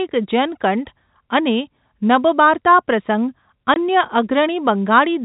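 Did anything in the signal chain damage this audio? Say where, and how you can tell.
Yes, at the network stage: packet loss filled with silence from 3.74 to 3.76 s, a 20 ms gap consistent with one lost packet. The waveform drops abruptly to silence and back, and the spectrogram shows a thin vertical blank band.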